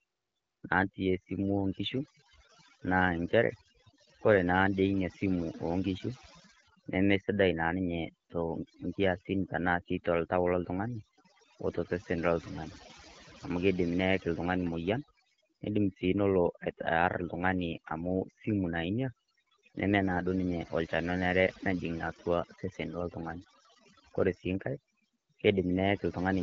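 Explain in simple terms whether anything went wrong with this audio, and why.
Overdone noise removal runs through the whole speech recording. The background sinks and breaks up into twinkling specks. Unlike codec roughness, this comes from quiet bands being switched off, not from a rasp.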